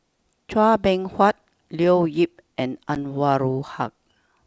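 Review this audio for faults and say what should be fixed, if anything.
A packet went missing on the ADPCM call at 2.95 to 2.97 s, and the gap was filled with silence. The loss covers 10 ms of audio, which fits about one packet. Because the decoder's adaptive predictor and step size stopped tracking the sender's while nothing arrived, the speech resumes after the hard-edged hole with slight distortion that takes some tens of milliseconds to settle. The G.722 wideband coding itself sounds consistent with its full 64 kbit/s mode. To prevent this, add packet loss concealment that extrapolates the missing audio and resynchronises the ADPCM decoder state, ideally with a jitter buffer and redundancy on the link.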